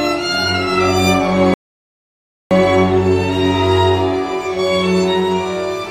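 A playback stall runs from 1.54 s to 2.51 s: the sound cuts out in mid-flow and the output stays silent for about 0.97 s before audio returns. The player likely ran short of buffered data, or its playback thread was briefly blocked.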